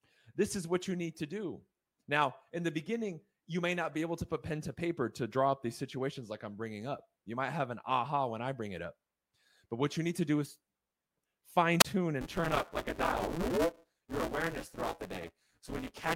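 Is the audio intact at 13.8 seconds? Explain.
No. Buffer tearing runs from 12.21 s to the end: the writer and reader have slipped, so roughly 40% of each buffer repeats audio about 10 ms old. The result is a steady 172 Hz robotic buzz, which fits a 256-sample buffer. It is heard only under the speech, unlike random dropouts.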